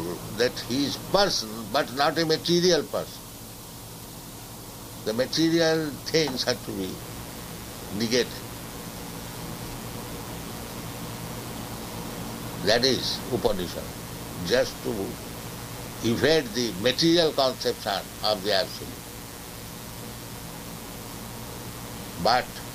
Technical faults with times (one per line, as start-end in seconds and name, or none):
6.99-22.75 mains buzz